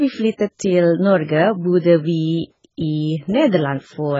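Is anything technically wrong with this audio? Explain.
Yes, the whole clip carries heavy AAC compression damage. Nothing gets through above about 7.5 kHz, so the speech sounds dull and closed-in, and the sibilants have a smeared, fizzy, warbling edge. The likely cause is AAC-LC squeezed to something like 12 kbps. At that rate the encoder drops the top band entirely and quantises the rest so coarsely that parts of the spectrum go missing or get patched with noise.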